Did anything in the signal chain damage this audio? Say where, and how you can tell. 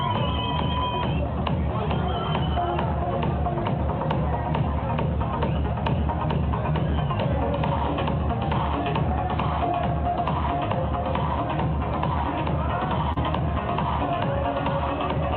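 Yes. There is a short concealed packet loss at 13.13 to 13.18 s, in the network stage, with the fix applied at the receiving decoder. About 40 ms of audio never arrived in time. The receiver covered roughly 34 ms of it by extending the preceding sound, carrying its pitch or shaping noise to match, and then cross-faded back into the real signal. You hear it as a brief smear or wobble, and a short transient in that span can disappear.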